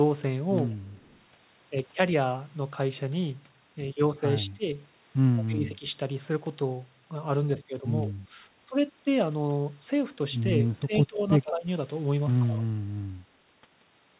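At 0.86 s a faint delayed copy of the speech appears, lasting to 1.21 s. It trails the talker by 136 ms and sits far below the speech. This is an echo leak. A loudspeaker at the far end likely fed the microphone, and its echo canceller let some through.

From 4.42 to 4.67 s the speech dips by roughly 20 dB. This is speech suppressed in double talk. Both sides likely spoke at once, and the canceller turned the talker down along with the echo.

At 5.36 to 5.68 s the echo returns, much louder, with the same 136 ms lag. Over 5.38 to 5.95 s the speech also drops by roughly 20 dB. A small dip of a few decibels follows at 8.04 to 8.32 s. From 10.75 to 11.67 s the speech is pulled down by about 15 dB, while a fairly strong echo runs from 10.94 to 11.51 s. A last dip of about 10 dB comes at 12.46 to 12.67 s.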